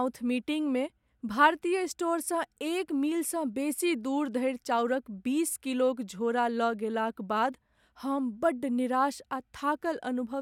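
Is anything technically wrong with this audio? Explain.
No, the signal holds steady throughout, with no technical faults to be heard.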